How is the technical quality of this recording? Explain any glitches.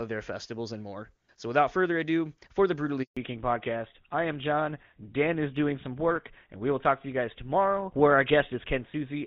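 The recording has two linked faults around 3 s, and the speech loses quality from that point to the end.

Handover gap, 3.03 to 3.17 s: the speech fades out within a few tens of milliseconds and stays silent for 140 ms. The call was being moved from one network to another, and no speech frames arrived during the switch, so whatever was said then is gone. Packet-loss concealment would fill a short dropout with smeared or repeated sound. Here there is clean silence, and the speech comes back with a different character, which marks it as a network switch.

Fallback to narrowband, 3.17 s to the end: after the gap, nothing above 4 kHz remains. Before it, the HD Voice path carries crisp sibilants and airy upper detail. After it, the speech sounds duller and rougher, which fits a drop from AMR-WB at 23.85 kbit/s to the older GSM full-rate codec. A simple low-pass filter would only remove the top end. 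Here the sound also turns grainier, because the older codec is coarser. The change starts exactly at the handover and lasts for the rest of the clip, so it points to a codec switch during the call.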